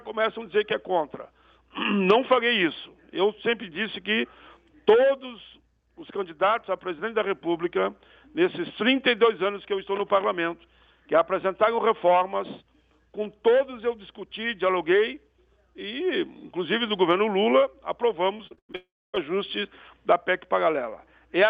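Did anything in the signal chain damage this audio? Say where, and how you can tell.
Yes, at the network stage. From 18.37 to 18.76 s there is repeated packet loss with a robotic, choppy sound: five short holes, the longest 94 ms, each patched by stretching the previous sound. On a spectrogram these appear as smeared, repeating bands between abrupt breaks.

Right after, from 18.76 to 19.15 s, the sound carries on as a fading buzz, then drops to near silence for about 270 ms before resuming with that part missing. The likely cause is a long network dropout. The waveform shows a decaying tail, then a flat gap.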